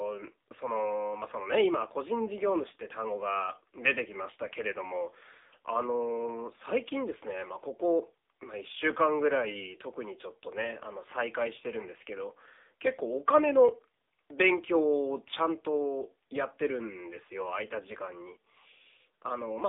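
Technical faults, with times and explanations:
Throughout: AMR narrowband mobile codec. The speech sits in a telephone band of about 300 Hz to 3.7 kHz, with nothing above 3.7 kHz, so it sounds thin and muffled. Heavy coding damage gives a buzzy, synthetic texture, which points to a low AMR-NB mode around 6.7 kbps. At that rate the vocal-tract model and its sparse pulse excitation, updated every 5 ms, capture the voice only roughly.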